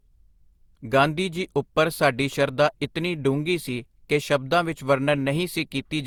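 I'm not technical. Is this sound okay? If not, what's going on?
No. Generation loss runs throughout the speech, making it sound swirly, smeared and hollow, with the starts of sounds blurred. The likely cause is saving it with lossy compression about four times over, each pass stacking fresh damage on the last.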